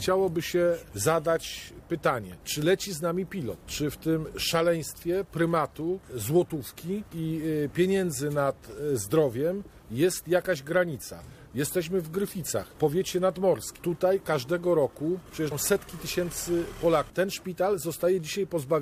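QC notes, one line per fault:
15.51 s, compressed frames skipped. The audio jumps forward here, losing around 150 ms of material. The gap fits about five whole frames of 26.1 ms each, which points to a frame-based codec dropping frames that were missing or rejected as damaged by the decoder. The sound resumes slightly ahead of where it should be.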